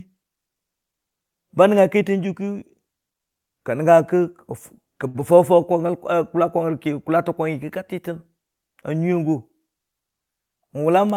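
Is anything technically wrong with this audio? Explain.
Yes. This speech clip has four network-playback faults: three bunched just after the 5-second mark and one near the end.

From 5.07 to 5.16 s there is a short stall from a late packet. A packet did not arrive on time and the jitter buffer ran dry, so the receiver held the last sound for about 70 ms and then resumed exactly where it had stopped. Nothing is lost, which is what separates it from packet loss. What you hear is a drawn-out sound with a slight buzz or dip, and the playback delay grows by 70 ms.

At 5.20 to 5.23 s comes a short concealed packet loss. Here about 40 ms of audio never reached the decoder. The receiver papered over it with only about 7 ms of extrapolated sound, continuing the previous pitch or noise, and then blended back into the real signal. Most of the missing stretch is simply skipped, which pulls the delay back down by roughly 30 ms. 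Unlike the stall, material is actually gone, heard as a quick smear.

From 5.36 to 5.88 s a jitter buffer slow-down follows. With its reserve depleted, the buffer rebuilt it by repeating single pitch periods and pause fragments, adding 47 ms in all. Speech plays at about 92% speed with unchanged pitch, so syllables sound stretched. This differs from the stall because the lengthening is spread over half a second rather than one held sound.

From 10.04 to 11.13 s there is a jitter buffer speed-up, the mirror case. The buffer held more audio than its target, so it trimmed short pitch-period slices repeatedly, removing roughly 70 ms. Playback runs at about 106% speed at the same pitch, making this stretch sound slightly rushed. Unlike packet loss, the cuts are tiny and distributed, so no single gap or tick stands out.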